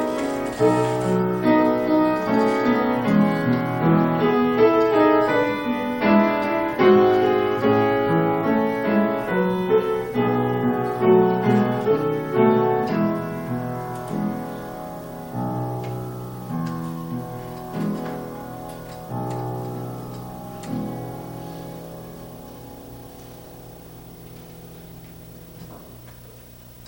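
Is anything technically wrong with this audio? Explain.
Yes. Video or display buzz runs throughout: a screen or video cable couples into the audio path, leaving a 59.94 Hz field-rate buzz with hash, plus a 15.7 kHz line-rate whine, roughly 25 dB below the signal.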